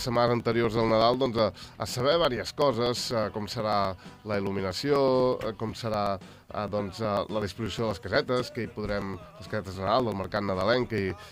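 A background process is stalling the USB link or audio driver at a fixed rate, producing periodic USB or driver dropouts from 0.16 s to 11.23 s. Every 0.123 s, about two milliseconds of audio is skipped outright rather than padded with silence, roughly a hundred times across that span. Each skip splices the waveform abruptly, so the sound carries a steady ticking at about eight per second, audible only where there is signal to break.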